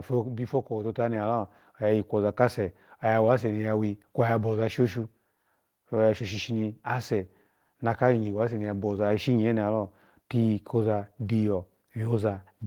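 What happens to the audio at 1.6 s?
At 1.6 s the clip is midway through an automatic gain rising event that runs from 0.5 to 2.86 s. The gain control judged the input too quiet and pushed its gain up by about 6 dB, so the speech and the background noise swell together over those two-plus seconds. On the waveform the envelope widens steadily across the span, and on a spectrogram everything, including the noise floor between syllables, brightens gradually.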